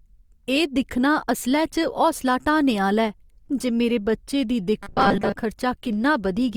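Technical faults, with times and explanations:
4.83 to 5.36 s, robotic sound from repeated short buffers: the speech turns into a hard, metallic buzz pitched at 200 Hz that still loosely tracks the syllables, and about half of what is heard in this stretch is repeated material rather than new audio. This is likely the playback side running short of fresh data and looping its last 5 ms chunk while real audio is dropped, so the loop rate stamps a fixed pitch over the voice.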